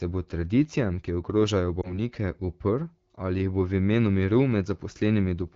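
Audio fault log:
1.81–2.01 s, lost AMR speech frames: just after "bo tradicijam ki ogrožajo", radio errors corrupted what sounds like one 20 ms frame. The decoder refilled it from the previous pitch and vocal tract settings at lowered gain, causing a brief dip or warble before speech recovers.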